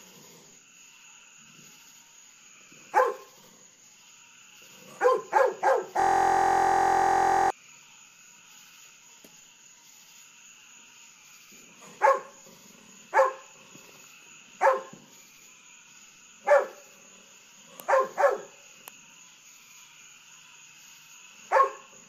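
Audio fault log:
6.00–7.50 s, system hang loop: a steady buzz at about 43 Hz replaces the sound, because a 23.22 ms slice repeats exactly, 65 times over. The system stalled while the audio hardware kept replaying its ring buffer, which fits a 1024-sample buffer.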